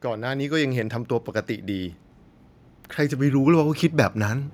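From 0.05 to 1.02 s the level climbs by about 5 dB, a case of automatic gain rising: the gain control judged the incoming speech too quiet and turned itself up step by step over roughly a second. Speech and room noise swell together, so the opening sounds as if it is fading in. On a waveform the envelope widens steadily across that span, and a spectrogram brightens evenly at all frequencies.

At 3.25 s a mains hum appears and continues to the end of the clip. It is a steady 50 Hz tone, picked up when power-line current leaks into the signal path through a ground loop or a nearby transformer, and it sits roughly 25 dB below the speech as a low, constant drone under the voice. A spectrogram shows a thin, unbroken horizontal line at 50 Hz starting at that point, and the waveform's baseline gains a fine, regular ripple.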